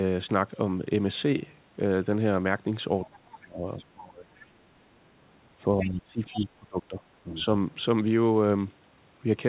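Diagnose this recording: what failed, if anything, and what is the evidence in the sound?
Call processing is where this goes wrong. The other side's voice leaking through shows up as faint scraps at 3.05–3.09, 3.78–3.84, 5.80–5.89 and 6.33–6.46 s, somewhere around 15 to 30 dB under the talker. That's likely residual loudspeaker echo the echo canceller didn't fully subtract.

Same stage for the second problem: speech suppressed in double talk. The talker's level sags hard, roughly 25 dB at worst, across 3.09–4.54 and 5.62–7.05 s, with a milder dip around 7.24–7.39 s. Those stretches overlap the leaked voice, so it's likely the canceller ducking everything while both sides talk. All of this sits inside a narrowband band that stops at 4 kHz, consistent with G.711.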